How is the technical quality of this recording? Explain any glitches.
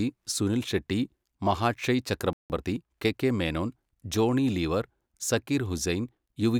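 Two linked glitches a little past the two-second mark affect this stretch of speech: a brief dropout, followed by a short rushed patch while playback catches up.

Playback stall, 2.33 to 2.50 s: the audio cuts to silence mid-flow for about 168 ms, then resumes. The likely cause is the player running dry on data or having its thread blocked, so output stops until it recovers. It sounds like a sudden hiccup or gap that wasn't in the original delivery.

Time-compressed catch-up, 2.50 to 3.16 s: right after the gap, the player works off its backlog by snipping out tiny slices and cross-fading the remainder, running about 1.25 times normal speed. Pitch stays put, so it doesn't chipmunk, but for roughly two-thirds of a second the speech sounds hurried.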